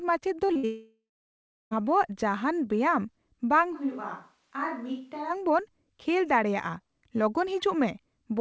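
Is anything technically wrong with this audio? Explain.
Yes. The early part of the speech breaks up through a chain of network losses, and later the speech moves onto a distant microphone for a stretch. Over the call codec, whose band stops at 8 kHz as G.722 would, these faults sound as follows.

Short concealed packet loss, 0.48 to 0.51 s and 0.53 to 0.57 s: two quick smears, as if the sound wobbles for an instant. A few hundredths of a second never arrived, and the receiver stretched the preceding sound across each hole before rejoining the real audio.

Burst of packet loss, 0.57 to 0.65 s: the sound hangs briefly, held and sinking in level. Around 60 ms in a row went missing, so the decoder kept extending the last sound while turning it down, and about 60 ms of speech is gone.

Long network dropout, 0.65 to 1.73 s: the trailing sound fades out and leaves roughly two-thirds of a second of near silence before speech resumes further on. 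This points to a likely interruption of the network stream, which took away just over a second of audio.

Switch to a distant microphone, 3.76 to 5.29 s: the speech suddenly turns roomy and thin and drops about 10 dB, while the room noise rises to about 40 dB below the speech. It then snaps back. The likely cause is the close microphone dropping out and a farther one filling in.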